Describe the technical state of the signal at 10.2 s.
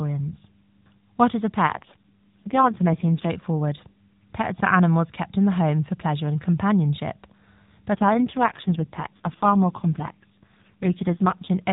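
At 10.2 s the speech sounds rougher, buzzier and more synthetic, with the same narrow band and no gap. This is an AMR rate drop running from 7.94 to 11.49 s. The mobile codec falls to a much lower rate, which fits a step from 12.2 to 4.75 kbps.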